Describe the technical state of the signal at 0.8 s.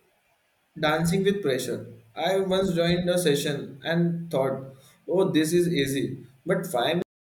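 At 0.8 s the signal is intact, with no audible fault at that moment.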